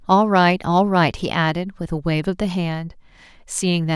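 No technical faults can be heard anywhere in the speech. The audio runs without any interruption or audible damage.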